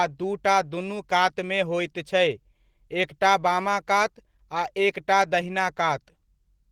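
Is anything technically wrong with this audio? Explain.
Yes. Opus voice compression runs throughout: the speech sounds hoarse and slightly robotic, with coarsely coded excitation, which fits a low bitrate around 16 kbps in hybrid mode. Unlike plain low-pass band-limiting, the top isn't simply cut off; an upper band above 8 kHz remains.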